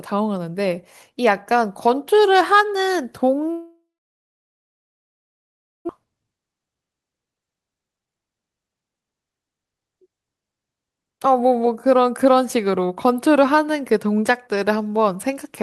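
From 3.51 to 5.91 s the speech breaks off in what is likely a long network dropout. The last sound carries on as a short fading buzz, then about 2 s of silence shows as a flat waveform and an empty spectrogram. The speech resumes with roughly 1.6 s missing.

From 5.99 to 9.47 s a jitter buffer speed-up drains the extra delay, around 0.7 s, built up during the outage. Short pitch-period pieces are cut repeatedly, so speech runs at 121% speed with unchanged pitch and sounds hurried. Spectrogram harmonics stay level while syllables crowd closer, with the Opus path's content topping out near 12 kHz.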